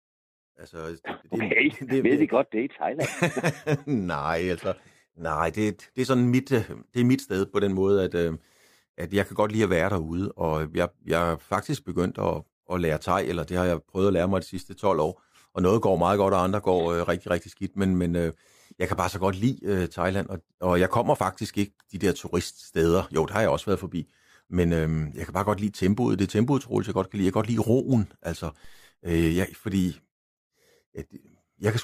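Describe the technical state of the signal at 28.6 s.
A DC step occurs at 28.65 s, between "godt lide roen altså" and "øh ja fordi". The waveform's zero line abruptly jumps by about -39 dBFS, as happens when a converter recalibrates or an offset input is switched in. The offset then drains away through a very low high-pass of about 2 Hz, so it decays rather than holding. It is heard as a brief low thump or click, while the speech around it continues unchanged.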